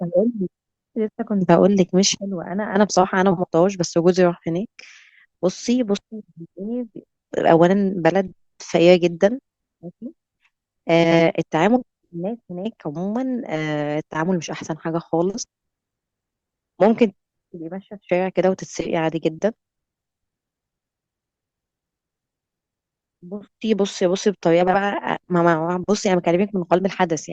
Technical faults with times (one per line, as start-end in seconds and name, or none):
3.31-3.45 frames out of order
11.04-11.21 frames out of order
24.61-24.76 frames out of order